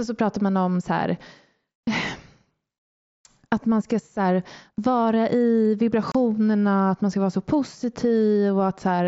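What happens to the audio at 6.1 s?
At 6.12 to 6.15 s there is unconcealed Bluetooth headset packet loss: about 30 ms of voice packets between headset and phone never arrived and nothing filled them, so the speech drops to a hard-edged silent hole, unlike concealed loss, which smears or repeats sound across the gap.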